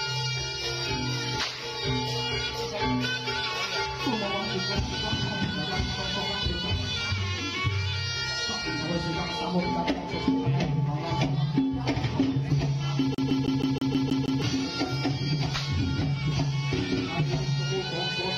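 A CD stuck on one turn runs from 13.15 to 14.42 s: a scratch keeps knocking the laser back one track, so the same 159 ms fragment repeats eight times, each jump marked by a brief mute, giving the quick, evenly spaced stutter of a skipping disc.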